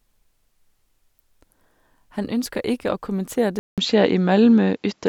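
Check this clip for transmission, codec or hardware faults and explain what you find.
One fault is present. From 3.59 s to the end, just after "å kommentere", the input likely switched to a poorer device. A 0.19 s silence precedes duller, band-limited speech with nothing above 7.6 kHz, a level shift of a few decibels and a new faint noise floor. The spectrogram shows a gap, then a hard ceiling.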